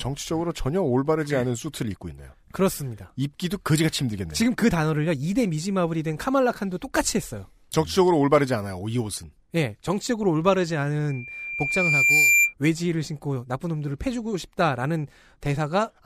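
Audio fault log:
11.08–12.54 s, loudspeaker feedback squeal: a 2.4 kHz tone swells over about a second to roughly 5 dB above the speech, as the mic-speaker loop exceeds unity gain.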